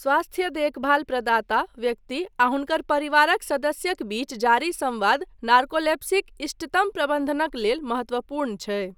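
No dropouts, distortion, noise bursts or timing problems turn up anywhere in the recording, so there is nothing to log.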